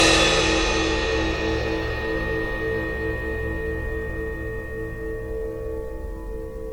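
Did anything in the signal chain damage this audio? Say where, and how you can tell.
Yes, at the codec stage, throughout the music: it sounds swirly, smeared and hollow, with blurred attacks. This is likely generation loss from around seven MP3 re-encodes near 92 kbit/s, each requantising on a shifted frame grid. A spectrogram shows accumulated spectral holes and smeared transients.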